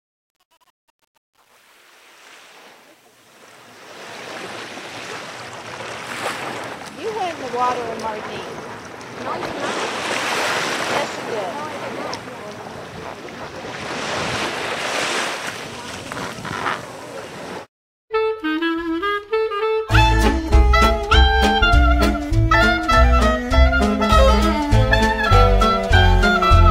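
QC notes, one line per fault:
0.00–4.38 s: truncation distortion on the fade-in. Undithered low bits turn the quiet start gritty, worst to 3.46 s, which fits roughly 9-bit resolution.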